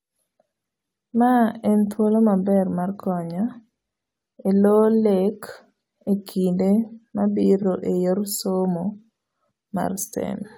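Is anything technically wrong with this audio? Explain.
Yes. Repeated frames occur at 4.27 to 4.30 s and 7.62 to 7.64 s. A 23.2 ms block, consistent with one compressed frame, plays twice, causing a brief stutter. A waveform or spectrogram shows an identical slice repeated.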